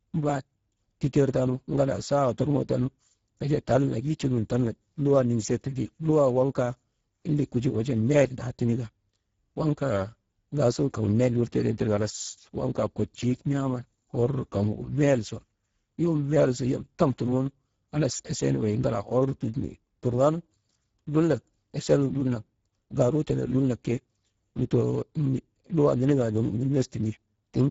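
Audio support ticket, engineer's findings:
Speex codec damage throughout: speech plainly hoarse and noisy, nothing above 7.7 kHz, top band just shaped noise fill. Excitation starved of bits, fits a setting near 10 kbps.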